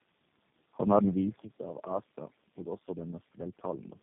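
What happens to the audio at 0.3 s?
At 0.3 s you're hearing tandem speech coding, which runs through the whole clip. The speech is rough, muffled and warbly, with nothing above 3.5 kHz. That fits about four low-rate codecs in a row, each re-encoding the previous one's already degraded output.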